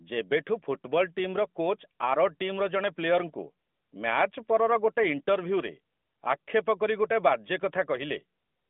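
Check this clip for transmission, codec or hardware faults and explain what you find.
No transmission, codec or hardware faults.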